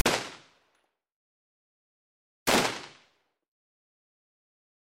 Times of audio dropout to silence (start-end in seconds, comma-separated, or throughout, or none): none